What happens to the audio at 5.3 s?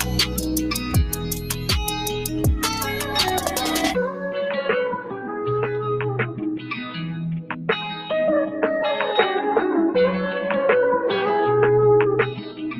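From 5.03 to 5.45 s the sound is cut by the noise suppressor: a speech-tuned suppressor reads this stretch as noise and pulls it down by up to about 6 dB. Unlike a dropout, the sound never vanishes. It sinks and thins, with sustained or decaying parts hit hardest while sharp onsets survive.

This sits within a noise suppressor applied to music or sounds across the whole clip, so the level swings by roughly ten decibels as steady content and tails keep getting mistaken for noise. The result is a pumping, fluttering quality rather than the even dip a level change would give.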